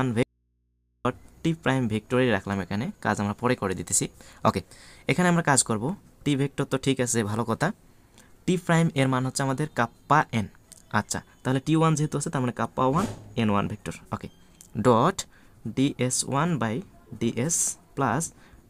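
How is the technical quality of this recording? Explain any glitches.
One glitch stands out: an audio dropout to a faint residue from 0.23 to 1.05 s. For about 0.82 s the signal cuts out abruptly and only low mains hum remains, roughly 45 dB below the normal level. The likely cause is a lost source feeding an input that stayed live. On a waveform the trace collapses to a thin band. A spectrogram goes dark except for steady hum lines near the bottom.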